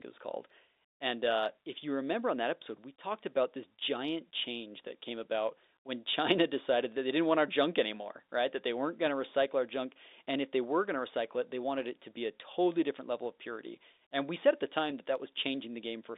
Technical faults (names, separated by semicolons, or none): none